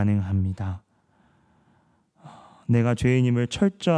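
Speech throughout, and nothing in the signal stands out as a technical fault: no dropouts, level problems or added noise.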